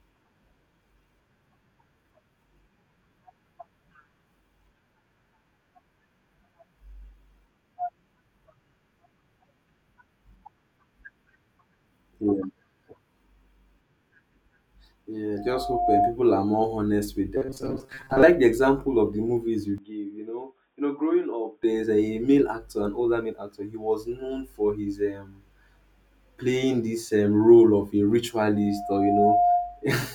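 At 15.37 s a loudspeaker feedback squeal begins. The microphone is picking up its own loudspeaker, and the loop runs away at 707 Hz. A pure tone swells over about half a second to roughly 5 dB above the speech and stops at 16.16 s. On a spectrogram it shows as a single bright horizontal line that thickens as it grows.

From 17.37 to 18.23 s, just after "are more honest with", the speech turns into robotic sound, most likely from repeated short buffers. A rigid, metallic 133 Hz buzz rides over the speech, which fits a buffer of about 7.5 ms being replayed while roughly half the real audio is skipped. The spectrogram shows evenly spaced harmonic stripes where the natural pitch contour should be.

After "of the movies you", at 19.78 s, the sound turns dull and boxy, likely because the input switched to a poorer device. There is no gap at the switch. The band narrows, the level drops by about 10 dB, and a faint new noise floor appears. 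On a spectrogram the upper energy is cut off, and the waveform visibly shrinks. Full bandwidth returns at 21.63 s, before "there's a male actor".

The 707 Hz squeal returns at 28.55 s after "um role of a". It builds over about 0.7 s to roughly 5 dB above the speech and lasts until 29.84 s.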